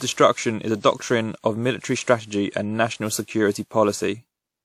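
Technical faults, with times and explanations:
Throughout, generation loss: speech sounds swirly, hollow and smeared, with nothing above 19.3 kHz, likely from about seven WMA re-encodes near 96 kbit/s.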